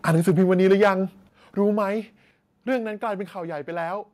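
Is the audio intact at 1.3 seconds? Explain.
No. At 1.29 s the level of the speech and the background behind it drops by about 6 dB in a single step and stays there. This is a microphone volume stepped down fault, likely caused by the call software judging the input too hot and cutting the device's input volume in one move. Because the gain change happens before any processing, voice and room sound fall together, heard as an abrupt loss of loudness rather than a fade.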